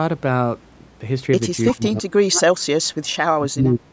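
Echo leak at 1.68 to 1.84 s: a faint, delayed copy of the speech surfaces about 335 ms behind the original, sitting roughly 15 dB below it. It sounds like a brief ghost trailing the talker. The likely cause is a far-end loudspeaker whose echo canceller failed to strip out everything its microphone captured, so a residue was sent back down the line.

Speech suppressed in double talk from 1.72 to 2.96 s: just as the echo appears, the speech starts dipping and breaking up, with the deepest drop around 30 dB and about a second of the span affected. It sounds like the talker fading and cutting out in pieces. This is likely an echo canceller that, facing both sides at once, could not tell the local talker from loudspeaker echo and attenuated everything.

Speech suppressed in double talk again from 3.37 to 3.92 s: the same pumping returns through to the end. It dips by up to roughly 25 dB over about 0.7 s in total, and the speech again sounds patchy and pulled back. 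In both passages the band-limited call sound, with nothing above 8 kHz, stays as it is. The damage comes from the suppression itself.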